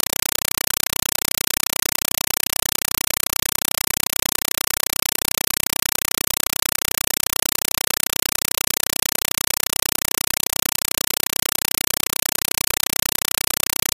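From the very start and right through to the end, you're hearing a compressed stream played as audio. An AC-3 bitstream has reached the output as if it were ordinary samples, so nothing ever decodes it. Every frame comes out as a short burst of noise, roughly 5.33 ms long, then silence from the zero padding, repeating at 31.25 Hz. The burst length fits a 256 kbps stream. The result is harsh, loud chattering static where the actual sound should be.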